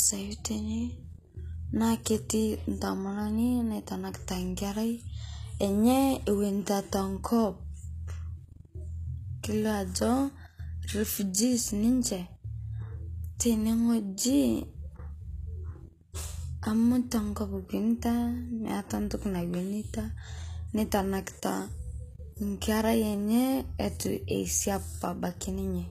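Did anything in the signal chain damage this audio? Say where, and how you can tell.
Yes, at the codec stage: sibilants sound gritty and metallic throughout, likely HE-AAC compression near 20 kbps. A spectrogram shows copied treble bands with smeared harmonics, cut off sharply at 14.9 kHz.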